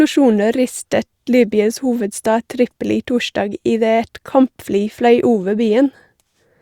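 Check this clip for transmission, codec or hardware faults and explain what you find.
Nothing to flag here; I listened through the speech and didn't hear a single fault worth mentioning.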